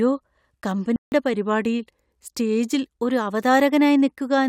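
At 0.96 s a block of digital silence cuts the speech for 160 ms, ending at 1.12 s: the sound cuts out abruptly. From 1.34 s to 2.98 s the speech plays about 5.8% slow and roughly 104 cents flat, then snaps back, likely a drift correction step.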